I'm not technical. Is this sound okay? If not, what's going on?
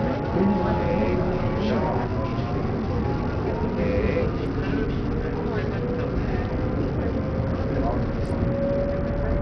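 No. The audio was most likely squeezed through heavy Bluetooth SBC compression, which splits sound into a few broad bands and starves the highest ones of data. From start to finish the treble drops out or flickers, with a gritty, grainy roughness riding on everything.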